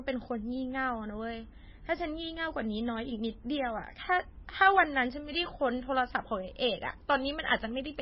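Throughout the speech, likely MP3 compression at a very low bitrate: nothing above 5.6 kHz, heavy watery swirling as weak frequency lines drop in and out, and smeared consonant attacks.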